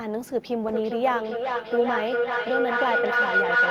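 From 0.7 s to the end, a feedback howl near 1.5 kHz builds, with repeats roughly every 0.4 s, peaking about 5 dB above speech; unlike echo, repeats grow.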